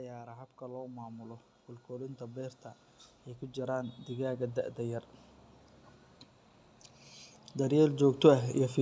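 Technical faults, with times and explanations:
0.23 to 8.56 s, automatic gain rising: three gradual swells, 0.23 to 2.65 s by about 9 dB, 3.39 to 5.09 s by about 6 dB, and 7.4 to 8.56 s by about 5 dB. Each time the automatic gain control judged the input too quiet and ramped its gain upward over one to two and a half seconds. Because the gain acts on the whole signal, the speech and the background noise floor grow louder together rather than the voice alone lifting.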